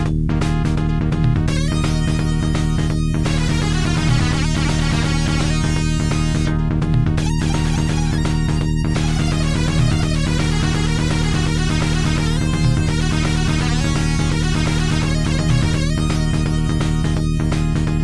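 No technical faults can be heard anywhere in this clip.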